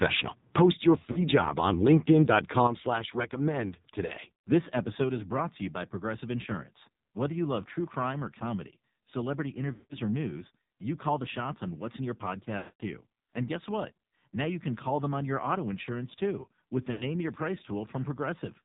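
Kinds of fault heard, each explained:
AMR narrowband mobile codec: Throughout, the speech sounds buzzy and synthetic at 5.9 kbps, with nothing above 4 kHz. The damage is steady, unlike the brief dropouts.
Microphone overload: From 0.02 to 0.19 s, peaks crackle harshly, about 3 dB over, likely from excessive input gain. The distortion is confined to loud peaks, unlike the constant codec buzz.
Lost AMR speech frames: At 1.1, 4.1, 9.7 s (after "crime or comedy celebrity"), 12.6 and 16.9 s, sound smears and fades for 40 to 220 ms rather than cutting abruptly.
Microphone volume stepped down: At 5.04 s, just before "is brought to you", everything drops about 3 dB in one step and stays lower, likely the call software lowering the input volume.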